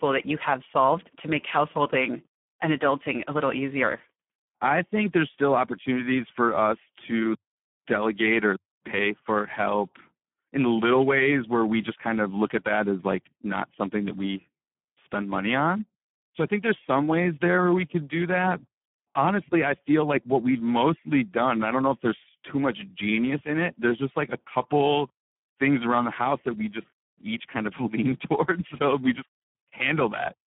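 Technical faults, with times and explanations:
Throughout, Speex codec: the speech sits in a telephone-like band of 150 Hz to 3.4 kHz, with nothing above 3.7 kHz, and sounds heavily hoarse and buzzy because too few bits describe the excitation. The damage fits a low setting near 8 kbps.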